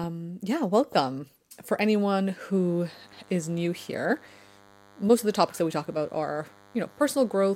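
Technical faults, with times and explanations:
2.52–7.56 s: DECT cordless phone buzz. A nearby DECT transmitter bursts every 10 ms and the audio circuitry rectifies it, adding a faint, steady 100 Hz buzz with harmonics beneath the speech.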